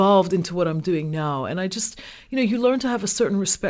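Nothing is technically wrong with this speech clip, which carries the normal sound of a wideband call codec with nothing above 8 kHz.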